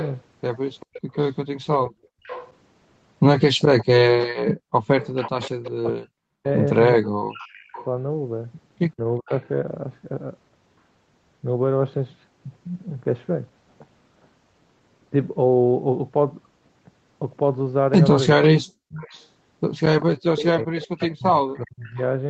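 From the start to 9.39 s, a loudspeaker-side echo canceller likely failed to remove everything its microphone picked up, so an echo leak carries a delayed copy of the speech back into the call. The copy trails the original by 391 ms and sits well below it, about 20 dB down, a faint double of the voice. It returns from 18.89 to 21.92 s with the same 391 ms lag, noticeably stronger this time.

Within that first stretch, the background is gated by the echo canceller while the far-end loudspeaker plays. The canceller clamps the microphone down by about 33 dB. Between 1.01 and 2.23 s the room tone drops out in short pieces totalling about a third of a second. At 4.54 to 4.74 s it vanishes again for about a fifth of a second. Each time it snaps back once the canceller releases.

From 5.74 to 9.45 s, both sides talk at once, and the canceller, unable to tell its own talker from the echo, likely turns everything down. 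This speech suppressed in double talk makes the main voice duck by roughly 40 dB in broken chunks adding up to about a second and a half. The same choppy cutting recurs from 18.35 to 18.8 s and again from 20.45 to 21.99 s, there overlapping the second echo leak. All of this sits inside a band that stops at 8 kHz.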